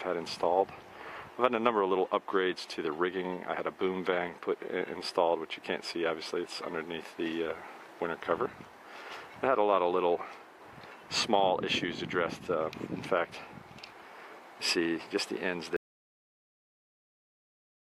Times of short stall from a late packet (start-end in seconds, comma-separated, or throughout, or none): none